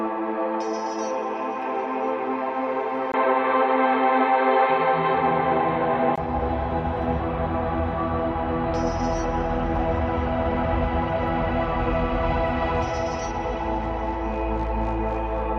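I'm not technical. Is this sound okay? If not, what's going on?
No. From 3.12 to 6.18 s the input likely switched to a poorer device, so the sound turns dull and muffled, with a brief gap at the switch.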